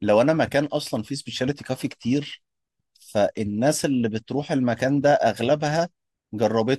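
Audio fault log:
Nothing to log here, as this speech clip has no faults to point to.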